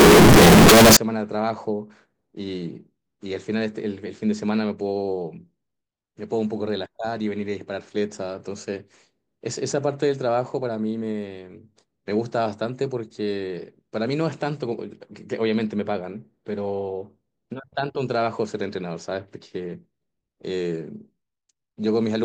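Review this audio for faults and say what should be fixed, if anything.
Float read as integer, 0.00 to 0.97 s: the opening becomes a harsh, nearly square wave at an almost fixed, high level, with background noise as loud as the speech, though pitch still carries. The likely cause is 32-bit float samples read as 32-bit integers, letting sign and exponent bits set each value. To prevent it, declare the sample format explicitly and verify it wherever the audio is read or converted.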